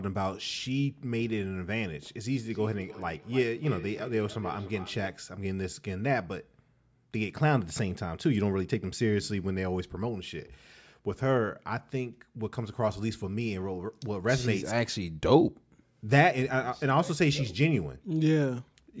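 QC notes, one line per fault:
2.3–5.2 s, feedback echo between two devices: a second device replays this microphone's signal, which is picked up again, so sound returns roughly every 300 ms at about 17 dB below the speech. Spectrogram shows faint, thinner copies trailing each onset; waveform shows small evenly spaced bursts.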